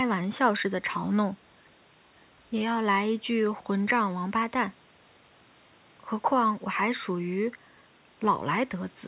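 Nothing technically wrong can be heard in this speech clip. The audio tops out at about 4 kHz, which fits a narrowband G.711 call path, and faint room noise sits about 34 dB below the speech.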